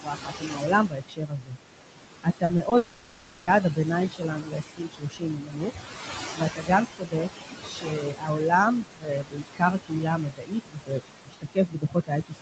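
Noise suppressor artifacts run through the whole clip. The suppressor pulls the room noise down by about 20 dB, so the background pumps between phrases.

From 0.01 to 1.57 s, speech is cut by the noise suppressor. Quiet parts, about 1.5 s in total, drop by up to about 22 dB and sound swallowed.

The same cutting returns from 2.23 to 5.89 s. Roughly 2 s of soft speech sinks by up to about 21 dB.

Inside that stretch come three short concealed packet losses, at 2.45 to 2.51 s (40 ms), 2.57 to 2.61 s (20 ms) and 2.69 to 2.73 s (20 ms). The receiver fills each gap by extending the previous sound. Each one is a brief smear or wobble.

From 2.77 to 3.49 s, about 0.7 s of real audio is replaced by a buzz or hiss that fades but never goes fully silent. The likely cause is a long network dropout. The sound then resumes past the lost part.

From 6.35 s to the end, the suppressor again clips soft speech by up to about 22 dB. 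The cut parts sound faint.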